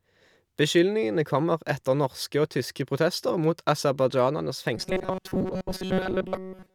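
After "tyske protester mot aserbajdsjanernes", from 4.77 s onward, robotic sound from repeated short buffers gives a metallic 188 Hz buzz, likely a looped 5 ms chunk, with evenly spaced spectrogram harmonics.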